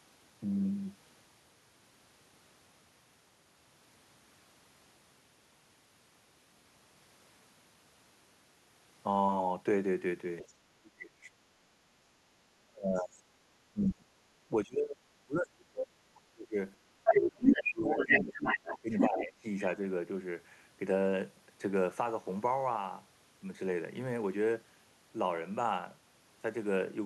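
From 10.42 to 12.02 s, speech is suppressed in double talk. The speech dips by up to about 35 dB, likely because the echo canceller turned everything down while both sides talked. At 10.48 to 10.53 s, the other side's voice leaks through as a faint scrap, about 30 dB below the speech. This is likely residual loudspeaker echo that escaped cancellation.

From 12.61 to 16.57 s, the speech is suppressed in double talk again, dropping up to about 30 dB. Brief leaks of the other side's voice come at 12.97 to 13.02 s, about 30 dB down, and at 13.82 to 13.86 s, about 15 dB down.

From 17.04 to 19.64 s, the other side's voice leaks through strongly, about 5 dB louder than the speech. Within that span, from 17.24 to 19.45 s, the speech itself is suppressed by up to about 20 dB.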